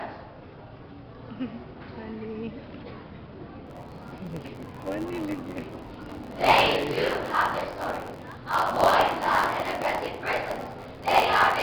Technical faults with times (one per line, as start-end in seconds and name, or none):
3.66-11.63 block size mismatch (truncated)